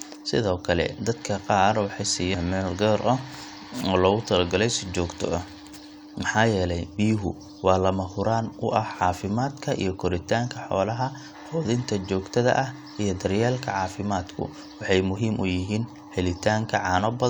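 No technical faults can be heard anywhere in the speech recording. The signal holds steady throughout, with no event that calls for a time stamp.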